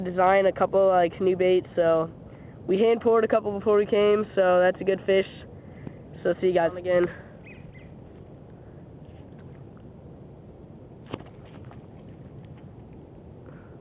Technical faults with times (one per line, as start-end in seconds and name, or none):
none